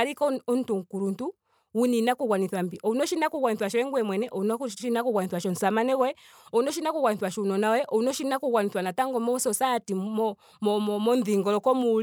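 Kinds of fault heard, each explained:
Nothing here stands out as a fault; the speech comes across without any dropouts, glitches or distortion to point to.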